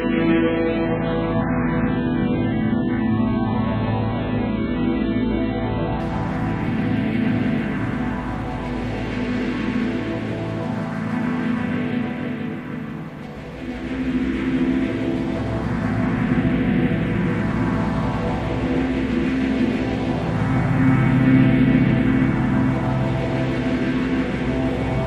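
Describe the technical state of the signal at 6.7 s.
At 6.7 s the signal is intact, with no dropout, clipping, distortion or other fault audible at that moment.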